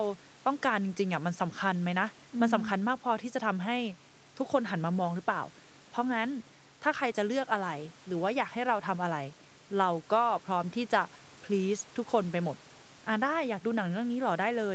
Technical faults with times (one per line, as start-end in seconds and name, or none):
none